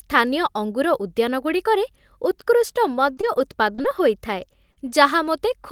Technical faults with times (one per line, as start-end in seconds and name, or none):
2.93-4.00 repeated packet loss (robotic sound)
4.72-4.90 short concealed packet loss